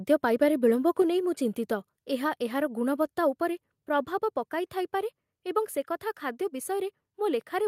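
At 1.02 s the speech and the background beneath it drop together by about 3 dB in a single step and stay at the lower level. This is a microphone volume stepped down, likely the call software lowering the device's input volume after judging the level too high. On a waveform the envelope shrinks abruptly at that point. A spectrogram shows every frequency band dimming at once, leaving a clean vertical boundary.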